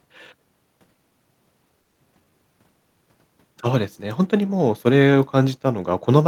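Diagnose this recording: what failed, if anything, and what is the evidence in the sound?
At 1.81 s the speech stops moving forward and the last sound is stretched into a fading buzz until 2.00 s, with nothing lost afterwards. That's a call audio freeze on the network side: packets were likely held up, the jitter buffer ran dry, and the receiver filled about 180 ms.

Right after, from 2.14 to 2.16 s, there's a brief smear where a short piece of speech goes missing. That's short concealed packet loss: roughly 50 ms never reached the decoder, a sliver was patched over, and playback caught up by about 40 ms.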